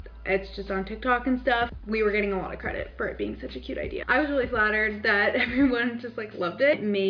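No technical faults can be heard in the audio.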